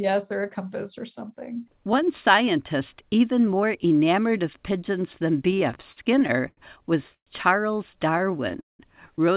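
A speech recording carried over a narrowband call link has several timing faults. Nothing shows above 4 kHz, and the tone suggests G.711 mu-law at 64 kbps. Repeated stalls (stutter) begin just after "enamored of pigeons than" and run from 5.51 to 6.60 s. Ten gaps, the longest 90 ms, are filled with 213 ms of continued sound. On a spectrogram they appear as short, smeared, repeated slices across about a fifth of that span. The delivery drags and hiccups, but nothing is lost.

From 7.14 to 7.30 s a call audio freeze holds the last sound for 124 ms. About 90 ms of that decays into a flat, near-empty stretch in the waveform before the speech picks up where it stopped. The likely cause is packets held up long enough to drain the jitter buffer.

A jitter buffer slow-down from 7.94 to 8.38 s plays the audio at about 92% speed and adds 43 ms. Single pitch periods are repeated, so the spectrogram shows the harmonics unchanged while their stretch is drawn out, and the sound is audibly slowed.

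Overlapping it, a second run of repeated stalls from 8.18 to 8.82 s has four gaps totalling 223 ms, the longest 188 ms. That is about 35% of the span, showing as long, fading held patches.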